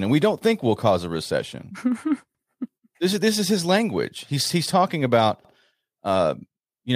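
At 2.35 s and 5.45 s, overlapping chunks replay 100 ms of speech, a stutter every 3 s; the spectrogram shows a repeated slice with a vertical seam.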